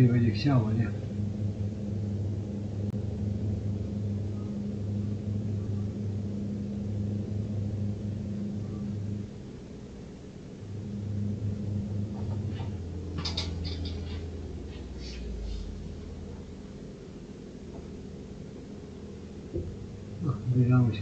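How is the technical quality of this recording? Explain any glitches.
The recording has one glitch. From 2.90 to 2.94 s the sound drops abruptly into a brief silence of about 32 ms, then resumes on time. This is a corrupt frame muted: damaged bits in a compressed frame were rejected by the decoder, and the player filled the gap with silence, which fits a single lost frame.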